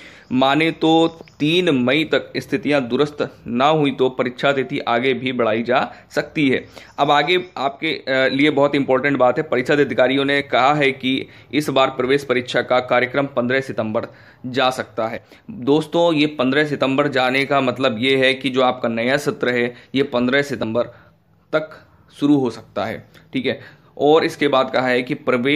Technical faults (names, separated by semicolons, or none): compressed frames skipped